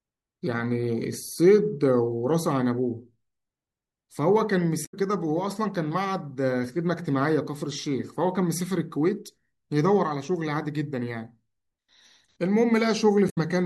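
At 4.82 to 4.94 s and again at 13.26 to 13.38 s, damaged data in the compressed stream makes the decoder misread frames and lose sync while it hunts for the next valid header, producing a brief chirp, squawk, click or short hole of about 0.12 s in the speech each time.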